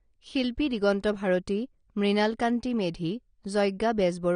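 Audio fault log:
Throughout, AAC compression: the speech has nothing above 9.7 kHz and carries plainly audible coding damage, giving a dull, band-limited sound with a coarse, smeared texture. The likely cause is low-bitrate AAC-LC encoding, which fits a rate of around 32 kbps. With so few bits for each frame, the encoder quantises its frequency lines coarsely against a hearing model and drops the top of the spectrum entirely, so high-frequency detail disappears and the remaining content loses definition.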